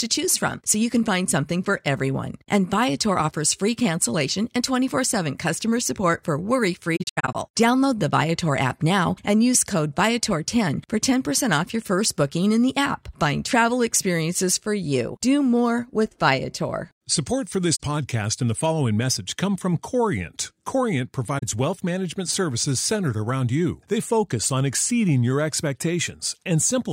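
At 6.96 s, just after "customer support for worry", the speech breaks up with AAC frame loss with muting. The dropouts scatter across about 0.38 s, to 7.35 s. Roughly 0.26 s goes missing, and the longest silent stretch lasts around a tenth of a second. The decoder zeroed the lost frames' spectrum. Overlapping windows fade the sound out and back in, so the holes are soft-edged. Shorter 43 ms holes follow at 17.75 s, before "podcast and the following", and 21.38 s, before "wealth management services centered".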